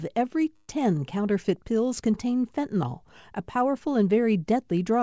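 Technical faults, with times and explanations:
0.56 to 0.71 s, call audio freeze: the speech stalls and its last sound is stretched into a fading buzz for about 126 ms, likely because late packets emptied the jitter buffer. Nothing is lost; everything after arrives 126 ms later. The spectrogram shows a smeared, fading horizontal band, and the waveform shows a regular, decaying stretch.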